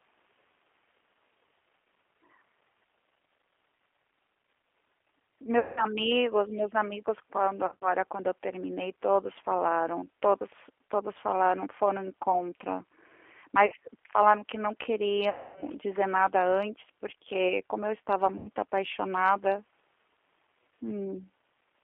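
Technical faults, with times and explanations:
Throughout, G.729 codec: the sound is squeezed to roughly 300 Hz to 3.4 kHz and comes out slightly rough and synthetic, which fits an 8 kbit/s G.729A encode.
5.59–5.86, 7.66–7.90, 13.66–13.74, 15.30–15.64 and 18.38–18.49 s, VoIP packet loss concealed by the speech codec: the decoder stretches the last sound into a fading buzz or coloured noise. The longest gap is about 260 ms, right after "falaram que não".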